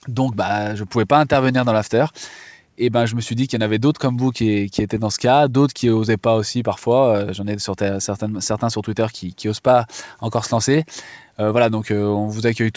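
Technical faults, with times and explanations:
Nothing here counts as a fault; the speech simply comes over a call link, and nothing reaches above 8 kHz, which fits a wideband call codec such as G.722.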